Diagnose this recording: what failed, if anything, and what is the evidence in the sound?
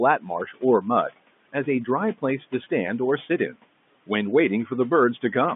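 The failure is in the network stage: packet loss with pitch repetition at 2.64 to 2.66 s. For about 20 ms, which fits a single lost packet, the receiver filled the hole by repeating the last pitch period, so the speech briefly sounds held and slightly buzzy instead of breaking off. That sets it apart from a buffer underrun or a hard dropout, which would leave a silent gap or a click. The repeated period sits on top of the room noise and within the telephone band of the G.711 line.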